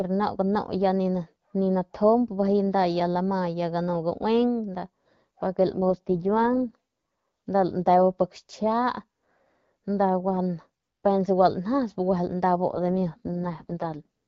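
A speech clip in which the AMR rate drops twice, at 5.76 to 6.76 s and 12.68 to 14.06 s, as the wideband codec briefly steps down to a lower mode, which fits a fall from 12.65 to 6.6 kbit/s. The band and continuity hold, but the sound turns rough and synthetic until the rate recovers.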